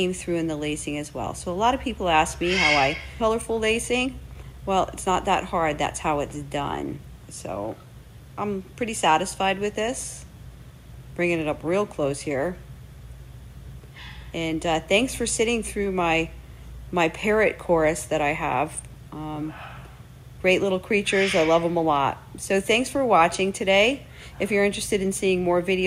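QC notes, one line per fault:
3.2 s, skip ahead: the audio lurches forward abruptly, with no silence or fill at the join. Roughly 0.7 s of material is simply gone, and the two sides of the jump butt up against each other. This happens when audio already queued behind a late or overflowing stretch is played immediately and the stretch in between is discarded, so the playback delay shrinks by about that same amount in one step.
3.29 to 6.99 s, jitter buffer speed-up: for nearly four seconds the sound runs about 6% fast while keeping its original pitch, giving a slightly hurried, pressed feel. The receiver was holding more audio than its target, so it repeatedly cut out short pieces one or a few pitch periods long to drain the excess. Altogether about a fifth of a second is trimmed before normal pacing resumes.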